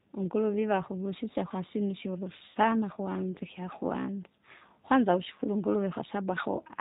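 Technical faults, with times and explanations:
Throughout: G.729 codec. The audio is band-limited with nothing above 4 kHz, and has a plainly audible rough, synthetic texture. This fits an 8 kbit/s G.729A coder rebuilding the speech from a vocal tract filter, pitch predictor and sparse pulses per 10 ms frame.
2.51 to 2.57 s: VoIP packet loss concealed by the speech codec. About 40 ms of audio went missing. The decoder extrapolated from its last pitch and filter settings at falling gain, giving a brief stretched, fading sound, with weakened sound lingering as later frames rebuild.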